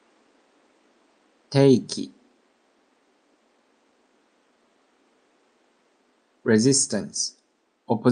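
Nothing stood out as a technical problem on listening to this audio.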